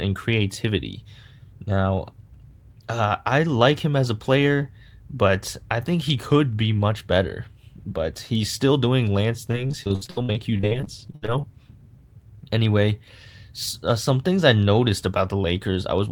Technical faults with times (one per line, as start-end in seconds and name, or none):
9.51-11.45 repeated packet loss (robotic sound)